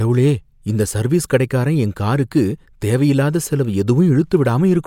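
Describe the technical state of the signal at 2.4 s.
At 2.4 s the speech signal is intact, with no technical fault audible at that moment.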